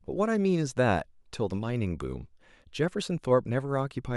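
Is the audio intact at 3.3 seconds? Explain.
Yes, at 3.3 seconds the speech plays through cleanly, with no dropout, click, distortion or other fault to be heard.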